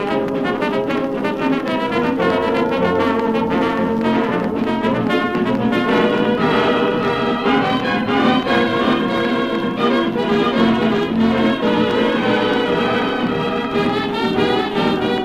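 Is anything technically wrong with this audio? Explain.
Yes. A doubled audio track runs through the whole clip. Most likely a second capture path or an edit is holding a second copy of the audio out of step with the first. That copy trails by roughly 0.7 s and plays at about the same level as the original. It has the full bandwidth of the original and no decay or room colour, so every sound comes back as a distinct, equally loud repeat rather than an echo.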